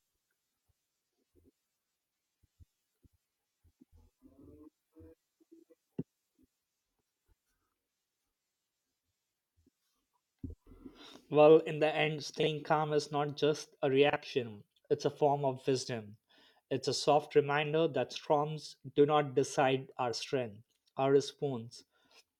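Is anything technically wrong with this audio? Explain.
Yes. Frames out of order occur at 12.40 to 12.47 s and 14.10 to 14.17 s. Two adjacent blocks, each about 32 ms, play swapped, causing a brief garbled flutter. Unlike a dropout, no time is lost.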